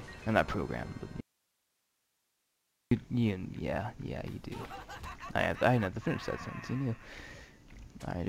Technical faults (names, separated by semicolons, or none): audio dropout to a faint residue